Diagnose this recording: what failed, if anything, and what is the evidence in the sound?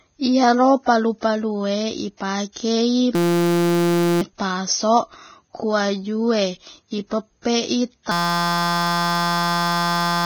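The codec stage has done real damage: the speech sounds hissy and grainy throughout, with nothing above 6.5 kHz and smeared consonant attacks. That's likely Vorbis compression at a very low bitrate (something near 17 kbps), where the treble gets quantised so coarsely it turns into noise.

The driver or buffer stage shows a system hang loop twice, from 3.15 to 4.21 s and from 8.12 s to the end at 10.25 s. Each time, a 5.8 ms slice repeats as a steady buzz at 172 Hz, which fits a 256-sample ring buffer cycling while the system was frozen. About a second of speech is lost the first time and about two seconds the second.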